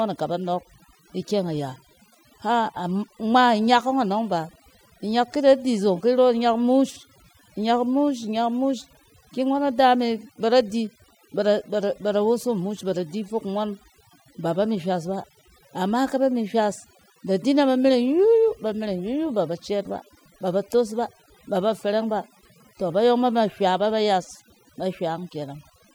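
Throughout the speech, overdone noise removal is audible: an over-aggressive denoiser drops frequency bands near its noise estimate, leaving near-silent gaps sprinkled with twinkling specks. Unlike a noise gate, it cuts band by band rather than muting everything at once.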